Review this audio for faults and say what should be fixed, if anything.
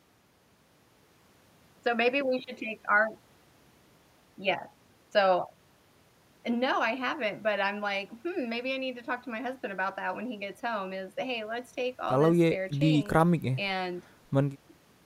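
Nothing to fix; no audible faults anywhere in the speech.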